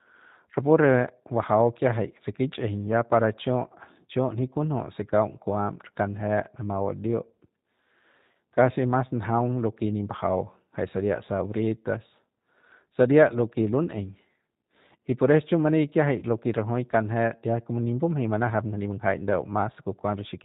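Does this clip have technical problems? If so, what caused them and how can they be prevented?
Yes. The whole clip is coded with the G.729 codec. The speech is band-limited with nothing above 4 kHz, and it has a rough, slightly synthetic grain. That comes from rebuilding each 10 ms frame from a vocal-tract filter, a pitch predictor and a few pulses, and the character points to the 8 kbit/s G.729A variant. The coding damage is plainly audible. Prevention: use a wideband codec such as G.722 or Opus where the link allows.

VoIP packet loss concealed by the speech codec occurs twice, at 8.31 to 8.36 s, just before "kasi mas njaung lo", and at 16.19 to 16.24 s. Each gap fits a single lost 30 ms packet. The decoder fills it by extending its last pitch and filter state at falling gain, so the sound smears into a brief buzzy tone or coloured noise that fades. Because each frame builds on the last, the voice stays weak or distorted for tens of milliseconds after packets resume. 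Prevention: reduce loss with QoS prioritisation, forward error correction or redundant packets, and an adequately sized jitter buffer.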